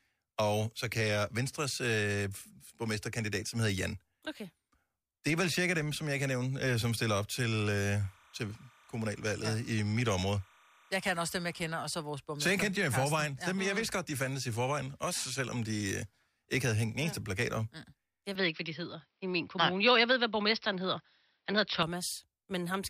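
From 8.01 to 11.69 s, starting just before "og så vores borgmester", a faint, steady chirping warble sits behind the speech, flicking between tones around 1 and 2 kHz, roughly 30 dB below the voice. This is timecode bleed: linear timecode running at 30 frames per second has leaked from a neighbouring track or cable into the audio path. Its square-wave code alternates between two frequencies, which produces that buzzy, twittering texture.

At 18.35 s the speech abruptly turns duller and boxier, with nothing above 5.8 kHz, a level shift of a few decibels and a new, faint noise floor far below the voice. There is no gap at the change, and the narrowed sound lasts until 21.83 s, when the fuller tone returns. The likely cause is the input switched to a poorer device, such as a different microphone or a headset's call profile, whose narrower bandwidth and different character briefly replaced the original source.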